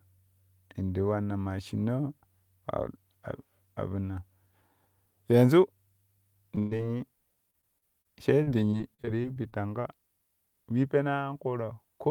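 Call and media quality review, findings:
Short concealed packet loss at 6.55–6.59 s and 6.77–6.81 s: about 20 ms of speech missing each time, patched by continuing the last sound, heard as a brief smear.

Burst of packet loss at 6.59–6.73 s: roughly 120 ms gone, last sound extended and faded, speech resumes further on with that stretch skipped.

Repeated packet loss (robotic sound) at 7.51–8.07 s and 8.43–9.54 s: 4 then 11 gaps, each up to 31 and 40 ms, concealed by repetition, giving choppy speech with pieces missing.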